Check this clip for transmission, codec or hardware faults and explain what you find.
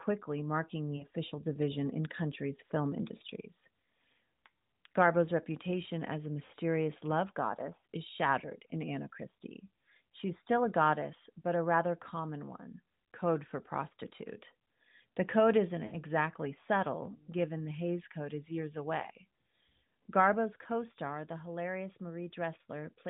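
Yes, there is one fault: lost AMR speech frames at 0.96–1.06 s, 6.46–6.52 s and 15.86–15.95 s. The decoder stretched the last good frame with falling gain, so the speech smears and fades rather than cutting to silence or clicking.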